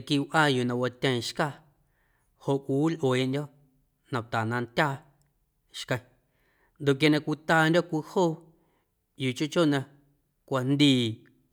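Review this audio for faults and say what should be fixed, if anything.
No faults were found in the audio, so nothing needs to be fixed.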